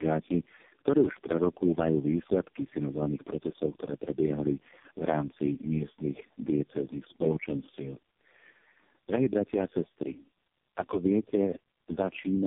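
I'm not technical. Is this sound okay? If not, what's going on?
No. The call passed through several phone networks in a row, each squeezing the voice with its own speech coder, so it was unpacked and squeezed again at every border, four speech coders in all. This is called tandem speech coding. Each coder worked on the already damaged result of the one before. Throughout the clip, the speech sounds rough, muffled and warbly, with nothing above 3.6 kHz left, which removes the crispness from sounds like s and f.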